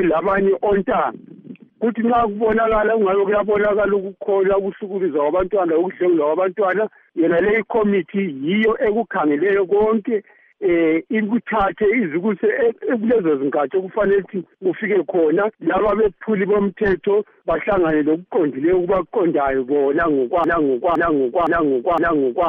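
At 20.44 s a broken-record loop starts. A 0.51 s fragment repeats four times, to the end. Playback likely stalled, resending its last fragment.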